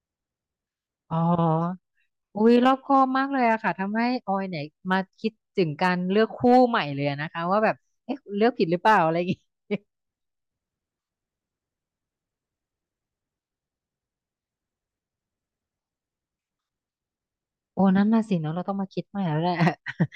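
Hard clipping crops up on speech peaks at 2.46–3.02, 4.92–4.95, 5.84–5.90, 6.45–6.80, 7.65–7.68, 8.86–9.02 and 19.61–19.68 s. The level slightly overran the stage, up to about 4 dB, so peaks were sheared flat, giving brief crackly edges on loud syllables.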